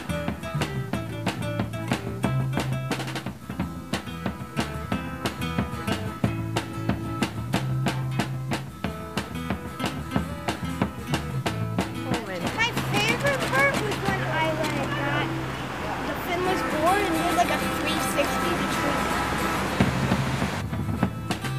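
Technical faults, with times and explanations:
Throughout, low bit depth without dither: the signal was likely truncated to about 7 bits without dither, leaving grainy distortion around 30 dB below the signal that follows the sound and breaks quiet passages into gritty steps.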